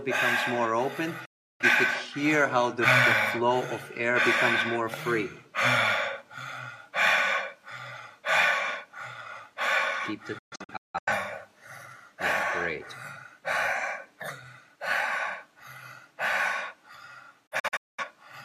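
At 1.25 s the sound fades in about 8 ms to 0.34 s of silence, a digital broadcast dropout where the receiver mutes until valid frames return. Several short holes follow at 10.38–11.12 s and 17.46–18.04 s. Unlike loss concealment, nothing repeats or smears; the programme is just missing.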